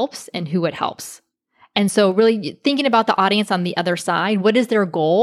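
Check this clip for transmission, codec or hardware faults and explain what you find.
Two faults turn up, both of the same kind: dropped samples. At 0.76 s, just after "and who it", and again at 2.12 s, just before "really thinking", the stream most likely lost a handful of samples, a fraction of a millisecond each. The waveform leaps straight to a later value, so each gap is heard as one sharp click.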